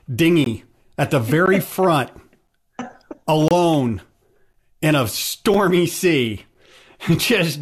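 Speech, broken by six short silent holes with hard edges: 0.44–0.46 s, 1.46 s, 2.47 s, 3.48–3.51 s, 4.53 s and 5.54 s. They last from about 5 to 27 ms and recur roughly once a second. That spacing matches one-second stream segments. This is a gap between stream segments. The timestamps leave a small space between consecutive segments. The player fills it with silence. No speech is lost.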